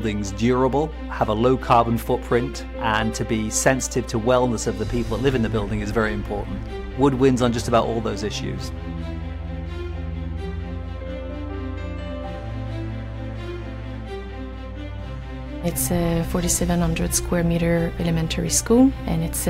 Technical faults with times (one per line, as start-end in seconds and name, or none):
0.00-19.49 mains hum